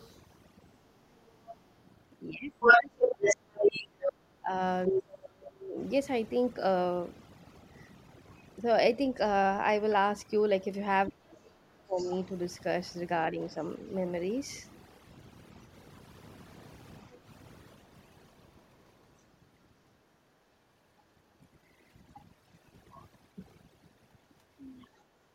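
Throughout the speech, overdone noise removal leaves a lowered, twinkling background; a spectrogram shows scattered isolated specks between emptied bands. From 0 to 1.68 s, the other side's voice leaking through sits roughly 20 dB under the talker, likely an echo canceller missing loudspeaker sound, visible as faint parallel harmonics. From 2.31 to 5.79 s, speech suppressed in double talk likely comes from the canceller ducking both voices. The talker dips by up to roughly 30 dB for about three seconds in total, showing as waveform notches. Meanwhile, from 2.6 to 5.02 s, leaked far-end speech, likely uncancelled loudspeaker echo, runs slightly louder than the talker. From 11.06 to 12.15 s, a quieter leak at about 20 dB down, likely the same residual echo, coincides with a further double-talk dip from 11.08 to 12.1 s, likely the canceller suppressing both sides. At 17.12 to 17.23 s, background gated by the echo canceller drops room sound by about 10 dB for 110 ms, a brief hole in the noise floor. 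From 24.84 to 24.97 s, a faint leak roughly 35 dB down is likely residual echo.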